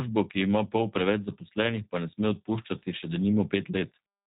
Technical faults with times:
0.00-4.27 G.729 codec

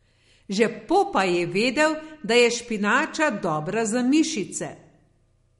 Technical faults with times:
0.00-5.60 MP3 compression

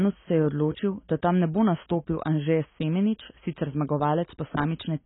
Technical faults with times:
0.00-5.05 AAC compression

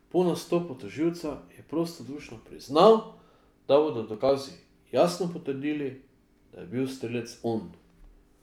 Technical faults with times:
4.14-4.29 processor overload crackle

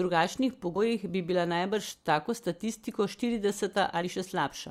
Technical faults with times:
0.75 compressed frames skipped
1.91-1.94 compressed frames skipped
4.01-4.03 compressed frames skipped

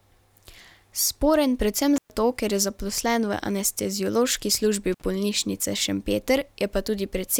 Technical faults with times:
1.96-2.10 intermittent contact
4.92-5.02 intermittent contact

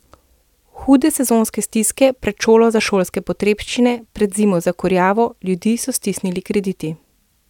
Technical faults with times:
none

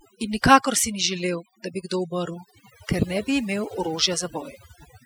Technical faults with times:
0.00-5.06 overdone noise removal

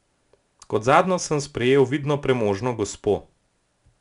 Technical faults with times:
0.00-4.00 4-bit ADPCM compression

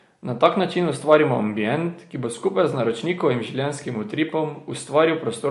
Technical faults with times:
0.00-5.50 MP3 compression

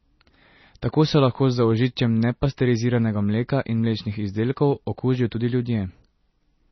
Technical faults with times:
0.00-6.71 MP3 compression

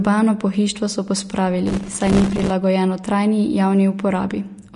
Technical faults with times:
0.00-4.75 Vorbis compression
1.67-2.50 processor overload crackle

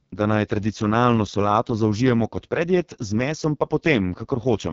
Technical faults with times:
0.00-4.72 AMR wideband (HD Voice) codec

